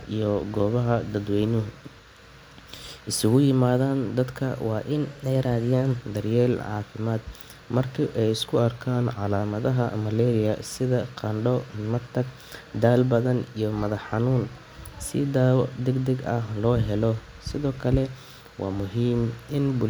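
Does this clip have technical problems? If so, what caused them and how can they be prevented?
Yes, the speech jumps in speed and pitch twice. From 4.92 to 5.97 s it runs 6.2% fast and about a semitone (104 cents) sharp. From 8.59 to 9.40 s, just after "caafimaad marka ay isku", it runs 6.2% slow and 111 cents flat, then snaps back. That's likely a drift correction step, where clock-matching software changed the playback rate in one jump to refill or drain its buffer. To prevent it, lock both devices to a shared clock, or use resampling that adjusts the rate gradually.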